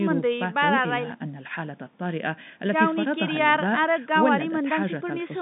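Nothing goes wrong anywhere in this speech, which just carries the narrow, familiar sound of an ordinary G.711 phone line, with nothing above about 3.8 kHz.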